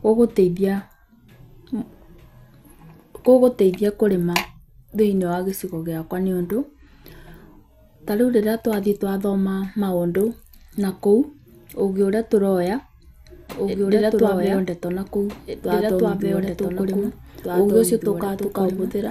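From start to finish the speech carries MP2 compression. The top end is dull. Coarse, gurgling grain sits plainly in the sound. Upper sub-bands seem starved of bits and flicker out. That fits a likely low rate near 80 kbps.

At 11.80 s, between "twathiĩ twathoma maũndũ nakũu" and "ũgĩ ũrĩa twaheo", a single sharp click stands out. It points to likely dropped samples. Only a handful went missing, well under a millisecond. The waveform jumps straight to a later value.

From 13.50 s to the end, a doubled audio track appears. A second full-band copy of the speech runs about two seconds behind the original. It is about 5 dB quieter. It has no room colour and starts abruptly. A likely cause is a slower second capture path.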